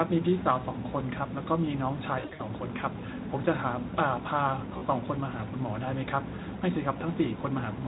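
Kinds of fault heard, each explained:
VoIP packet loss concealed by the speech codec: Speech data went missing, and the decoder filled each gap by repeating its last pitch and filter at falling gain. From 2.19 to 2.43 s, about 160 ms is lost in pieces over 200 ms, the longest run 60 ms. The speech smears into a buzzy tone or coloured noise that fades. It stays weak briefly afterwards. A shorter 40 ms dropout at 4.77 to 4.84 s blurs one moment. The Speex coding, at 15 kbps, does only light damage.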